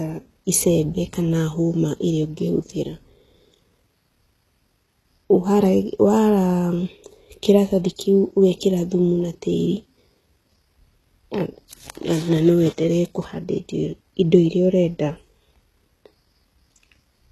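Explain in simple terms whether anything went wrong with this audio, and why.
Something did go wrong, and it runs through the whole recording: the speech sounds grainy and metallic, with s sounds coming out gritty or lisped, and nothing is present above about 12.3 kHz. The likely cause is HE-AAC compression, which keeps only the lower frequencies and fakes the treble by copying them upward. Unlike a simple muffled low-pass cut, the top end here still sounds bright, just wrong and artificial.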